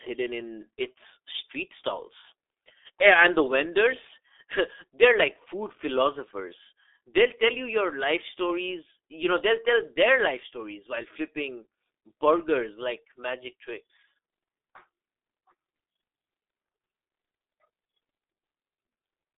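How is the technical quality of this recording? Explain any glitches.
The quality is poor. The whole clip has passed through the G.723.1 codec, and the damage is heavy. From start to finish, the speech sits in a narrow telephone band of roughly 300 Hz to 3.6 kHz. Nothing is heard above 3.8 kHz. The codec works in 30 ms frames and updates its model of the voice slowly. Quick changes get smoothed over. The result is muffled, hoarse speech with smeared consonants. The coarseness fits a rate near 6.3 kbit/s.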